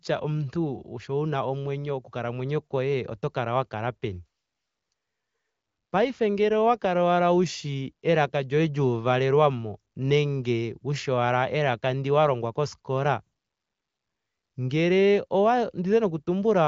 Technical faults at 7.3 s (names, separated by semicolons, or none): none